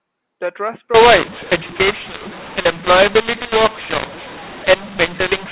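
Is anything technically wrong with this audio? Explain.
Yes. From 0.94 s to the end, mu-law and A-law are mixed up: mu-law telephone samples are decoded as A-law, scrambling levels, so the speech turns harsh and pauses fill with noise.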